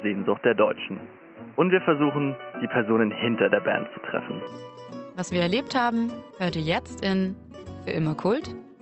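From 0.0 to 4.47 s the sound is dull and boxy. Likely cause: input switched to a poorer device. At 4.47 s it clears without a gap.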